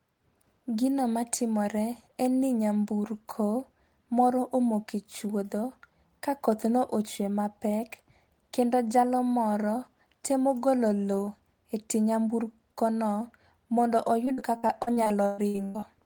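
From 14.25 to 15.84 s the speech breaks into repeated packet loss, giving a robotic sound. More than a dozen short holes open in quick succession, the longest about 119 ms. Each is patched by stretching the last fragment, so around 37 percent of that span is concealment. A single dropout leaves one clean gap. Here the rapid chain of fills makes the speech choppy, with pieces missing.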